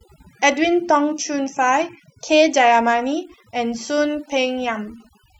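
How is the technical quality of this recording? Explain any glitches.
The recording suffers from one fault that runs throughout. Overdone noise removal: bands near the noise estimate are cut off, taking quiet parts of the voice with them and leaving twinkling specks in near-silence. Unlike codec artefacts, the residue sits where background noise was.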